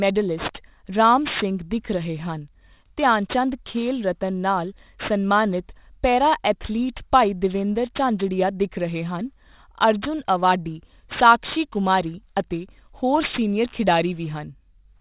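The sample rate was cut without an anti-aliasing filter first, which fits a drop from 48 kHz to 8 kHz. Speech energy above the new 4 kHz limit folded back down into the band, producing aliasing throughout. Sibilants and breathy consonants turn gritty and metallic, with false tones that don't follow the speech, sitting roughly 15 dB below it, while the spectrum stays dense right up to the 4 kHz edge.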